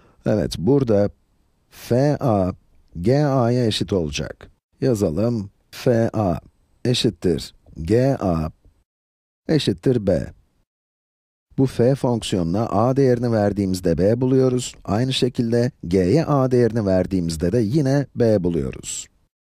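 No technical faults can be heard anywhere in this audio.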